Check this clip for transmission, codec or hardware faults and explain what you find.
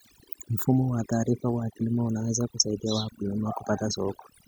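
One processing fault stands out, running through the whole clip: overdone noise removal. The noise reducer was pushed too hard, so individual frequency bands near its noise estimate get dropped to almost nothing, taking the quieter parts of the speech with them. You hear near-silent gaps with twinkly specks.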